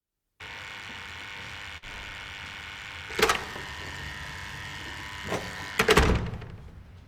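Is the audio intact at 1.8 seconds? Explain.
No. From 1.77 to 1.84 s the sound stalls: the last bit of audio is carried on and faded out over roughly 46 ms, and the audio then jumps ahead with about 40 ms gone. This is a burst of packet loss. A run of consecutive packets failed to arrive in time, so the receiver kept repeating and softening what it last had before resuming further along the stream.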